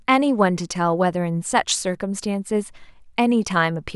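No technical faults are audible anywhere in the speech.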